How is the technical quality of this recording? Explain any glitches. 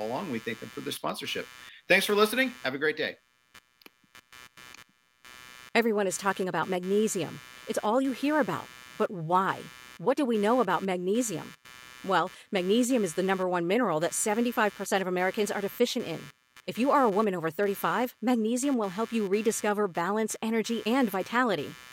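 The recording is marred by computer activity noise running through the whole speech clip: a buzzy, chirping texture pulsing at roughly 150 Hz, sitting around 25 dB below the voice. It comes from processor or graphics load shifting the shared ground, so it tracks machine activity rather than the speech.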